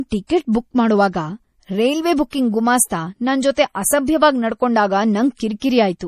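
Throughout, the speech has a watery, swirling texture, and nothing sounds above 15.1 kHz. This is likely MP3 compression at a low bitrate near 40 kbps: a treble cut at a fixed frequency plus weak frequency lines flickering between frames. A plain low-pass filter would dull the sound without that swirl.

From 2.30 to 2.33 s, between "ಟಿಕೆಟ್ ಬುಕ್ ಮಾಡೋವಾಗ ರೈಲ್ವೆ" and "ಗುಮಾಸ್ತ ನನ್ ಜೊತೆ", a 26 ms hiss comes before a sharp attack, which sounds softened. This pre-echo is block-wide quantisation noise leaking into the quiet moment ahead of the onset. Unlike a click or reverb tail, it comes before the attack, not after it.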